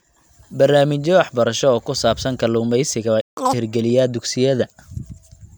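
At 3.21 s the speech cuts out mid-flow and the output stays silent until 3.37 s, a gap of about 160 ms before the sound picks up again. This is a playback stall: the player most likely ran out of buffered data, or its audio thread was held up, so it had nothing to send to the output until it recovered and resumed.

From 3.37 to 3.53 s the speech that follows rushes by at double speed, with the pitch pushed up around ten semitones into a chipmunk-like squeak. This is catch-up at higher speed: having fallen behind during the stall, the player resampled its backlog at 2.0 times the normal rate to recover the lost time, raising speed and pitch together until it was back in step.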